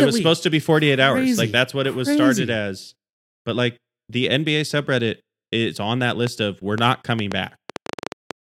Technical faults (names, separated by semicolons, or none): train of clicks